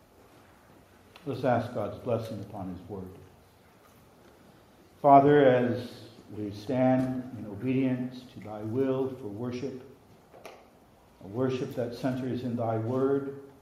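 No technical faults can be heard anywhere in the clip.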